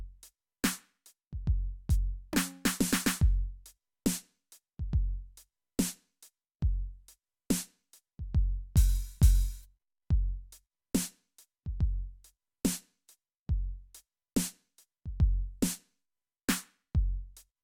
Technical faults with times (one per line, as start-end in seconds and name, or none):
none